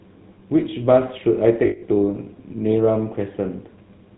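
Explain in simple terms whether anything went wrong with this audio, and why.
Two things went wrong. The whole recording went through the GSM full-rate codec, an old mobile-phone coder. It rebuilds the voice from a simplified model driven by regular pulses and drops everything above 4 kHz. So the speech sounds muffled, buzzy and gravelly throughout, and clearly so.

There are also lost GSM frames from 1.66 to 1.83 s. For that moment the decoder had no good data. It kept replaying the last good sound. Instead of speech, you hear a brief rough, metallic ringing.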